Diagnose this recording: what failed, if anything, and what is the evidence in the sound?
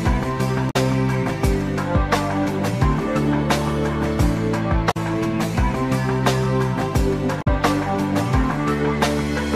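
The failure sits at the codec stage: damaged data in a compressed stream, with three disturbances each about 70 ms long, at 0.69–0.76 s, 4.90–4.97 s and 7.41–7.48 s. Corrupted bytes made the decoder misread or reject frames, lose sync and search for the next valid frame header. Unlike a clean buffer dropout, the disruption is the decoder's garbled or absent output for unreadable frames, which can sound like a chirp, squawk, click or brief hole.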